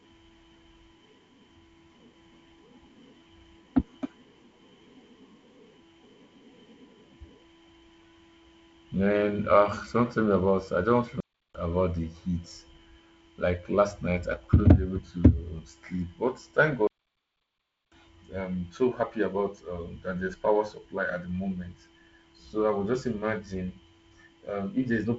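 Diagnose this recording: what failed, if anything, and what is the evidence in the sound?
The speech cuts to silence twice, from 11.20 to 11.55 s between "me about I just" and "about the heat", and for about 1.05 s from 16.87 s before "I'm so happy about". This is a playback stall, likely the player's buffer running dry until it resumed.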